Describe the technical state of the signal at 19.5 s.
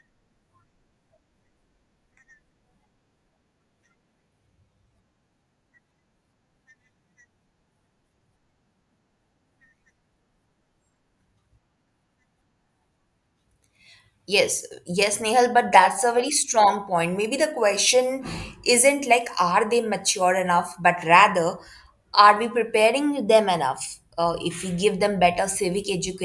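At 19.5 s the speech signal is intact, with no audible fault at that point.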